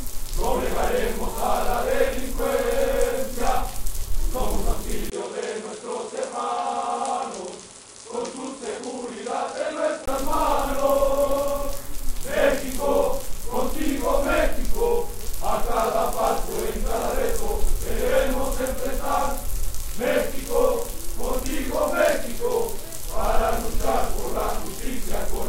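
An input switched to a poorer device from 5.10 to 10.08 s: after a 20 ms gap, nothing above 10.5 kHz survives, the level drops about 5 dB, and a faint new noise floor appears. The likely cause is the system changing to a narrower-band input.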